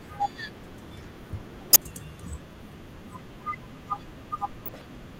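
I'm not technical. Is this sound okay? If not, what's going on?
No. A corrupt frame decoded fault shows up at 1.70 to 1.76 s as a loud, sharp blip, and again at 4.66 to 4.84 s as a quieter, longer burst. Damaged chunks of compressed audio were played anyway, briefly putting sound at the wrong pitches.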